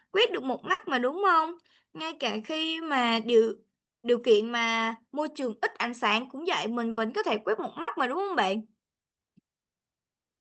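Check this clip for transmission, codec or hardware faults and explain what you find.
There are four bursts of packet loss, at 0.73 to 0.82 s, 3.97 to 4.06 s, 6.91 to 7.00 s and 7.81 to 7.90 s. Consecutive packets were lost, so the receiver stretched the last sound for about 60 ms, fading it as a buzz or hiss, then skipped roughly 60 ms of speech. The call's Opus codec path limits the top end to about 8 kHz.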